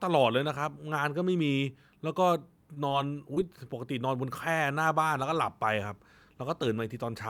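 At 2.74 s, a short stall from a late packet: one packet had not arrived when its turn came, so the jitter buffer ran dry and the receiver held the last sound for about 20 ms until the packet turned up. Playback then resumed from the same point, shifted about 20 ms later, so nothing is lost. What you hear is a sliver of speech drawn out a touch too long, with a faint buzz or dip where the sound is held.

Two short concealed packet losses follow, at 2.88 s and 3.34 s. Each time, about 20 ms of audio never reached the decoder in time, and the receiver patched the gap with roughly 20 ms of synthesised continuation, carrying on the preceding pitch or shaped noise before blending back into the real signal. Each lasts about 40 ms and sounds like a brief smear or small wobble.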